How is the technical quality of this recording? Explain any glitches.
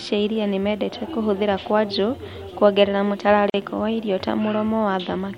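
The recording has one glitch, a gap at a join of encoded pieces. From 3.50 s to 3.54 s the speech cuts to silence for 42.5 ms, then resumes exactly where it stopped. The pieces were encoded separately and joined untrimmed, so one run's padded final frame and the next run's start-up delay both remain. Unlike a packet dropout, nothing is lost. The speech is only pushed later, and the gap's abrupt edges are smeared by the codec.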